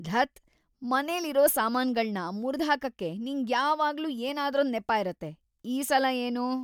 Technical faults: none

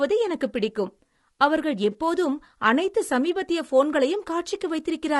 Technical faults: low-delay AAC compression; AAC frame loss with concealment

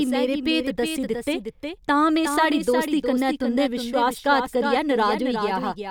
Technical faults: doubled audio track

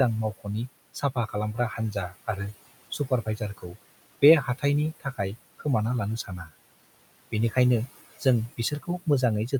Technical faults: noise suppressor artifacts; speech cut by the noise suppressor

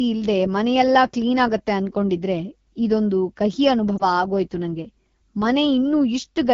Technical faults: AMR wideband (HD Voice) codec; lost AMR speech frames

